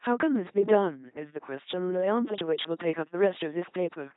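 LPC-10 vocoder damage, present throughout the speech. Each short stretch is rebuilt from a simple all-pole filter of at most ten poles, excited either by a pulse train or by noise, never a mix. The speech therefore has a buzzing, mechanical, robotic quality, with abrupt flips between buzz and hiss wherever the voicing decision goes wrong. The damage is heavy, nothing is heard above 3.8 kHz, and the coarseness points to a rate of about 2.4 kbit/s.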